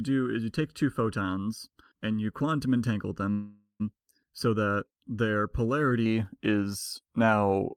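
Speech, with two faults. From 0.00 to 6.06 s there is channel delay with comb filtering. One channel lags by under a millisecond, so mono summing leaves a hollow sound, notched from around 700 Hz. From 3.31 to 3.82 s a call audio freeze fills about half a second with a fading continuation of the last sound, including a brief silence. The speech then resumes late but complete, likely after a jitter buffer ran dry.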